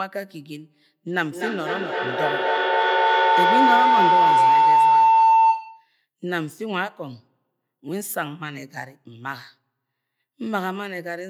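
From 1.07 s to 5.97 s there's a feedback howl. Two devices in the same room are on the call, so each one's loudspeaker feeds the other's microphone, and the loop adds level on every pass. The repeats keep growing and narrow to a tone around 1 kHz, pulsing roughly every third of a second at the loop's delay. At its peak the howl sits about 10 dB above the speech, then it cuts off at 5.97 s.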